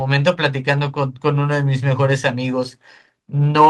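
No technical faults can be heard anywhere in the recording.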